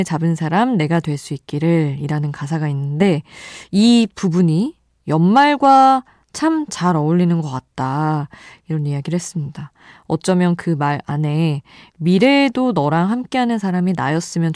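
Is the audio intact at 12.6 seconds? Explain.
Yes, the speech plays through intact at 12.6 s, with no audible fault at that moment.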